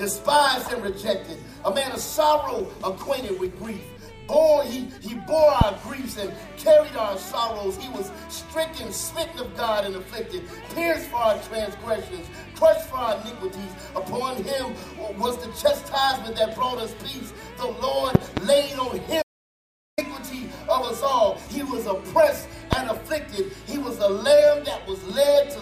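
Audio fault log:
5.61–5.64 s, 18.15–18.40 s, 22.73–22.75 s: loud pop. Sharp pops about 20 to 25 dB above the sound, with a double pop at 18.15 s, likely from a sudden voltage pulse. The sound continues underneath. Each appears as a tall narrow waveform spike and a thin broadband vertical line on the spectrogram.
19.22–19.98 s: audio dropout to silence. About 0.76 s of sound vanishes mid-flow, likely because the input was lost while silence kept being written, so no room tone remains. The waveform collapses to a flat line, and the spectrogram shows a blank column.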